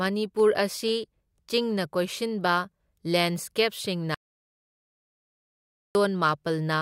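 A speech recording with one audio dropout to silence. At 4.15 s the sound cuts off mid-flow and returns at 5.95 s. The 1.8 s gap is silent, with no room tone. The likely cause is a lost input while recording continued.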